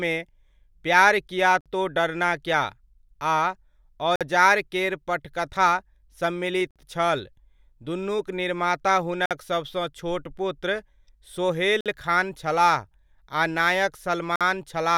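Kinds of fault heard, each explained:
Gap between chunks: the speech arrives in blocks about 2.5 s long, with a 50 ms hole of silence at each join, at 1.61, 4.16, 6.71, 9.26, 11.81 and 14.36 s. For example, one falls between "दुनुक निर्माता" and "सभसँ छोट पुत्र". Unlike a dropout, nothing is lost. The speech resumes exactly where it stopped, just delayed. The holes have hard edges and recur at a fixed spacing, which points to chunked delivery rather than random packet loss.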